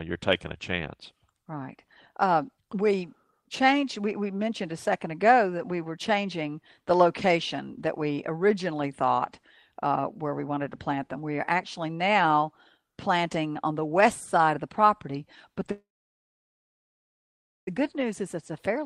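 Packets were most likely held up in transit, draining the jitter buffer: a call audio freeze runs from 15.71 to 17.69 s, after "of the property but". A brief fading buzz gives way to about 1.8 s of silence, then "good news" resumes intact, roughly 2 s late.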